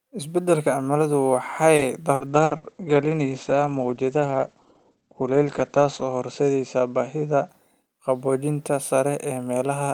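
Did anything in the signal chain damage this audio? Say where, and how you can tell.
Yes. The network stage damaged the audio with repeated packet loss, heard as a robotic sound. From 1.75 to 2.65 s, just after "cimiladu waxay", the audio breaks up four times. The longest hole is 60 ms, and about 23% of that stretch is concealment. The receiver patches each missing packet by extending the last sound, which gives a choppy quality with pieces missing. On a waveform this looks like short repeated or smeared segments. A spectrogram shows flat, buzzy harmonic smears where detail should change.

The codec stage shows a call bitrate drop from 2.28 to 7.55 s, beginning at the same "cimiladu waxay" landmark. The sound turns rough and muffled, and it sounds worst for about 3.8 s. That fits the encoder stepping down from around 40 to 13 kbps. On a spectrogram, energy that reached about 20 kHz now stops abruptly near 8 kHz, forming a hard ceiling. 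Coarser coding also leaves blotchy, watery texture below that ceiling.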